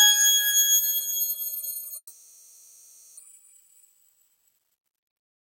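From 1.97 s the sound stops moving forward: the last fragment is stretched into a buzzy, hissing tail that fades away over about 1.2 s, followed by a brief silence of about 50 ms. At 3.21 s the audio returns, but it has jumped ahead, skipping about 0.88 s of material. This pattern points to a long network dropout as the likely cause. The receiver filled the gap with decaying concealment, and the playout delay shifted by roughly a third of a second.

From 3.93 s to the end, the sound runs noticeably faster without any change in pitch, at about 107% of normal speed, so it comes across as hurried. This is a jitter buffer speed-up. With more audio built up than it aims for, the receiver drained its excess buffered audio by repeatedly cutting out short pitch-period-sized pieces. In total it removed roughly 150 ms to bring the latency back toward its target.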